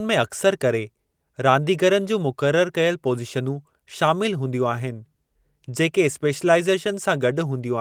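Nothing in the recording stood out as a technical problem on listening.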